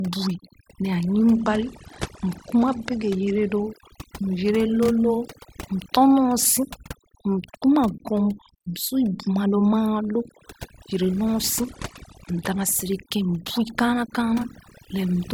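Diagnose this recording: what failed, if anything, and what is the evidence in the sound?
Overdone noise removal runs through the whole clip, at the call-processing or cleanup stage. The background sits at near silence with little twinkling specks. The suppressor was set too hard, so it's gating individual frequency bands, and quiet voice detail goes out with the noise.

There's also a Bluetooth SBC bit pool drop at the codec stage, from 1.35 to 3.64 s and again from 11.60 to 12.75 s. In both stretches the treble dulls and a gritty haze comes up, then clears. That fits the link dropping from bit pool 31 to 12, around 88 kbps, which starves the top sub-bands and coarsens everything else.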